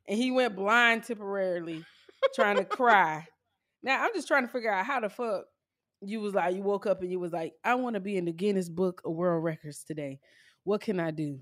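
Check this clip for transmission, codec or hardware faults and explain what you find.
Nothing to flag here: the speech comes across steady and intact, with no faults to report.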